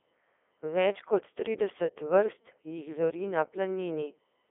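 A short speech clip, and the whole thing has gone through a Codec 2 vocoder. It's the classic robotic, buzzy digital-radio voice, since the decoder rebuilds speech from sine waves driven by pitch, voicing, energy and a spectral envelope rather than keeping the waveform. The damage is heavy. The sound sits in a narrow 300 to 3600 Hz line band with nothing above 3.8 kHz, and the quality fits Codec 2's top 3.2 kbit/s mode.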